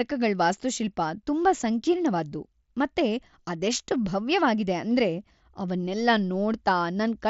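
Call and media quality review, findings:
No faults found in this speech clip.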